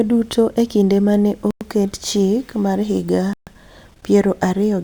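A speech clip that cuts to dead silence twice, first just after "e kinde ma ne" from 1.51 to 1.61 s, then from 3.33 to 3.47 s, gaps of about 0.10 and 0.14 s. Each time the speech picks up where it stopped or slightly later. That marks a Bluetooth stall, likely from interference delaying packets until the headphone buffer emptied, rather than a codec dropout, which would patch the gap with warbly concealment.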